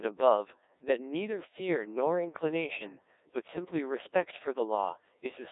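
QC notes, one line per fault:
Throughout, Codec 2 vocoder: the speech sounds robotic and buzzy, heavily mangled, with a narrow 300 Hz to 3.7 kHz band and nothing above 3.8 kHz. The decoder rebuilds sound from sine waves using only pitch, voicing, energy and envelope, which fits roughly 1.6 kbit/s.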